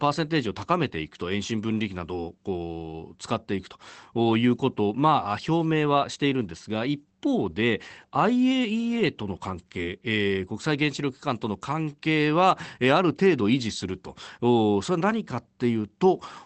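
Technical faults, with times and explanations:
No faults found; the speech shows the normal character of a call codec path, with content topping out around 8 kHz, consistent with Opus at a speech-oriented bitrate near 24 kbps.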